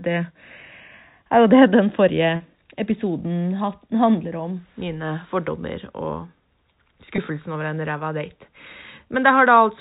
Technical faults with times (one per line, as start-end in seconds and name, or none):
2.36-2.40 packet loss with pitch repetition
7.16-7.18 packet loss with pitch repetition